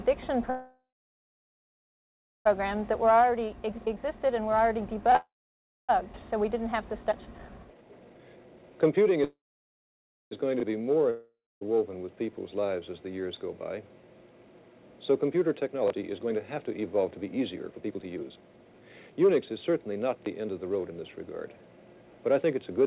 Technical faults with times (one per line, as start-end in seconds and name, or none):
0.50-2.47 call audio freeze
2.59-9.24 jitter buffer speed-up
3.86-3.88 skip ahead
5.16-5.91 call audio freeze
7.11-7.13 skip ahead
9.24-10.33 call audio freeze
11.10-11.63 long network dropout
15.56-21.02 jitter buffer speed-up